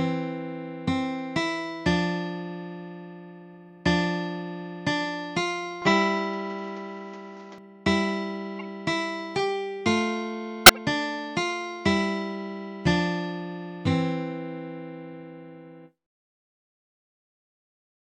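From 5.82 to 7.58 s the top end vanishes above 7.6 kHz, the level shifts by roughly 5 dB and a new noise floor appears, likely the input switching to a poorer device. Then come two stretches of corrupt frames decoded as garbage: a quiet blip at 8.59 to 8.61 s across about two frames, and a much louder, longer burst near -5 dBFS from 10.66 to 10.77 s.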